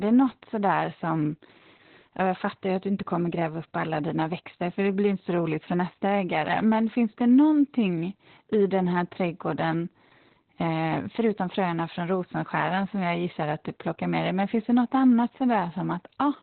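Opus voice compression runs through the whole speech clip, from the first moment to the last. The sound suggests a very low bitrate, about 8 kbps, with the codec in its SILK linear-prediction mode and squeezed to narrowband, so nothing survives above roughly 4.3 kHz. The excitation is coded coarsely, leaving the voice heavily muffled, hoarse and faintly robotic, with consonants dulled and the top end of the sound gone throughout.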